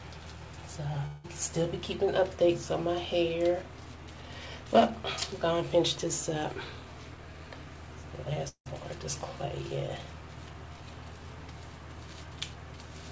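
At 1.06 to 1.26 s and again at 8.48 to 8.68 s, the audio breaks into a smeared buzz that stretches the last sound and decays, the signature of a likely long network dropout. In each gap about 180 ms of audio never arrives and the receiver fills the hole by extending what it last had. The second fill fades further, leaving roughly 100 ms of silence before the sound resumes with the lost part skipped. Throughout, nothing reaches above 8 kHz, consistent with a G.722 call path.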